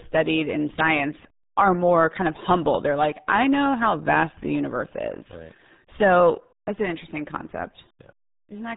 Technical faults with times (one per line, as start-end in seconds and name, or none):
0.00-8.77 RealAudio 14.4 codec